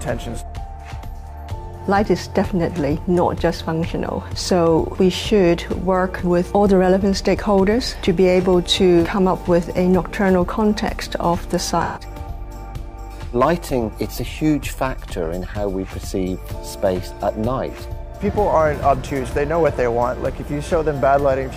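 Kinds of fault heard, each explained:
AAC frame loss with concealment: a smeared, noisy patch from 11.83 to 12.02 s, where the decoder rebuilt 128 ms of missing audio from the last good spectrum.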